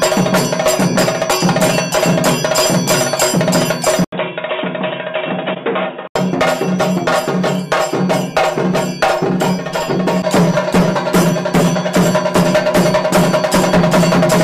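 From 4.04 s to 6.16 s the audio turns dull and boxy, with nothing above 3.8 kHz, a drop of a few dB in level, and a new background noise sitting roughly 30 dB under the signal. An 80 ms silence marks the change. This is most likely the input switched to a poorer device, such as another microphone or a headset's narrowband call profile, before the original input returns at 6.16 s.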